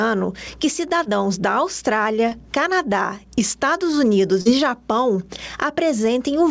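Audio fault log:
throughout: gain pumping. The level swings by about 15 dB, so loud and soft parts are squashed together. This is likely an input gain set far too high, held down by a fast limiter.
1.04–1.07 s, 2.29–2.33 s, 4.41–4.47 s: short concealed packet loss. Holes of about 20, 20 and 40 ms were filled by carrying the preceding sound forward, then blended back into the real audio. Each is heard as a brief smear or wobble.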